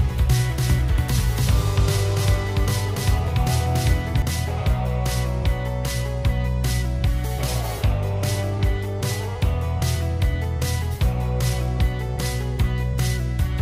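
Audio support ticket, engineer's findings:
Doubled audio track, 0.0 to 4.22 s, already present at start. Full-band copy trails by about 300 ms at roughly equal level, no decay or room colour. Ends abruptly at 4.22 s. Likely a slower second capture path mixed in.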